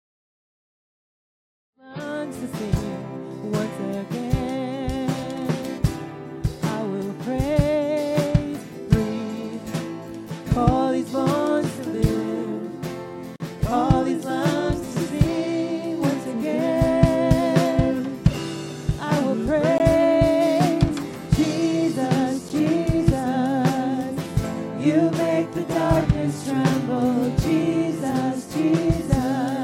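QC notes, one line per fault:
0.0–2.0 s, adaptive stream starting at a low bitrate: the player began on a low-bitrate version to start quickly, then stepped up once it had measured the connection. Nothing sounds above 5.1 kHz and codec artefacts are stronger, which fits 16 kbit/s AAC. Quality jumps abruptly at 2.0 s with no gap, inside the fade-in that ends at 2.44 s.
13.36–13.40 s, 19.78 s, 22.49 s, block of digital silence: samples were replaced with zeros, most likely because the output buffer was not filled in time. The sound drops straight to nothing and returns with no fade. The 40 ms and 19 ms blocks are short holes, the 14 ms one a tick.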